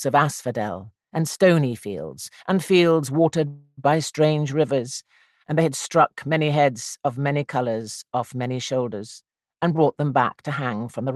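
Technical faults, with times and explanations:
3.47 to 3.91 s, call audio freeze: the sound stalls and its last moment is drawn out as a fading buzz for about 300 ms, with a brief near-silence. It then resumes exactly where it stopped. Packets were likely held up and the jitter buffer ran empty. Nothing is lost, but everything afterwards lands 300 ms late.
9.22 to 11.16 s, jitter buffer speed-up: the audio runs at about 109% speed at unchanged pitch and sounds hurried. The buffer was holding more than its target after the delay, so the receiver repeatedly cut out short pitch-period slices, roughly a fifth of a second in all.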